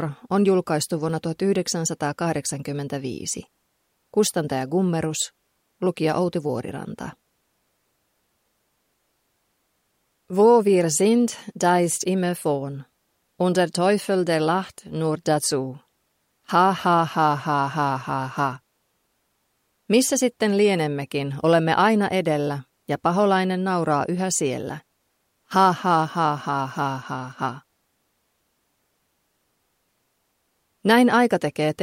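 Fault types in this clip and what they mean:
No faults detected in this audio.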